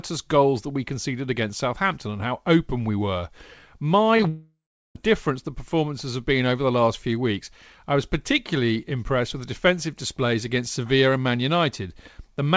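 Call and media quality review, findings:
Short concealed packet loss, three events: 4.17–4.20 s, 4.21–4.23 s, 4.23–4.25 s. Brief smears or wobbles, 10–20 ms each, from the receiver extending the preceding sound over missing packets. Real audio resumes within tens of milliseconds, unlike a dropout.

Long network dropout at 4.29–4.96 s, just before "difference the performances have". Concealment buzz or hiss fades, then about 0.4 s of silence; 0.66 s never played, likely from a network outage. The gap is long and the onward audio skips ahead. Audio is band-limited above 8 kHz, consistent with a G.722-type wideband codec.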